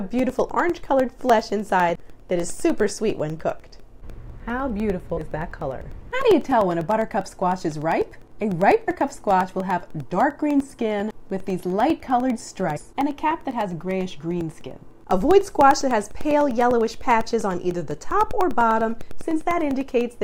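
From 0.09 s to 20.11 s, periodic USB or driver dropouts replace about a millisecond with silence every 0.1 s, producing steady ticks whenever sound is present. Compressed frames skipped at 5.16 s, 8.87 s and 12.76–12.78 s advance the audio by roughly 0.1, 0.1 and 0.2 s in 21.3 ms frames, each a sudden jump ahead.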